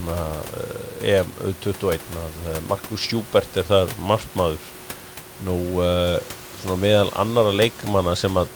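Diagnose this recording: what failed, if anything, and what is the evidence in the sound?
Nothing in the chain has failed: the speech sits about 16 dB above a steady bed of room noise picked up at the microphone, which belongs to the acoustic recording itself rather than to any stage of the signal path.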